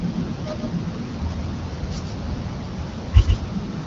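Throughout the speech a doubled audio track is audible: a full-band copy trails about 150 ms behind, roughly 5 dB quieter, likely captured again by a slower path. Unlike an echo or reverb, it has no decay or room colour, just one clean repeat. The AMR-WB coding stays clear.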